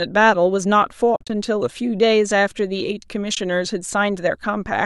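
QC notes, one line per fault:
1.16–1.30 s, AAC frame loss with muting: the speech drops out in patches across about 140 ms, about 110 ms gone in total, the longest gap around 50 ms. The decoder zeroes each missing frame, and the overlapping windows fade out and back in, so the holes are soft-edged. The spacing points to short frames of about 10 ms, likely from the low-delay AAC the speech is carried in.
3.35–3.37 s, AAC frame loss with muting: a brief 20 ms dip, the same soft fade down and up.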